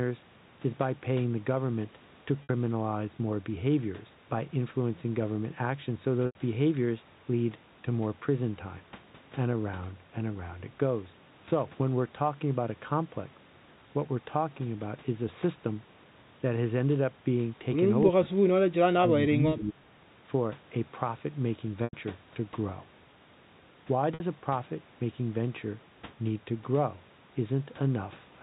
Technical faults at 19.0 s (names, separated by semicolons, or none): speech suppressed in double talk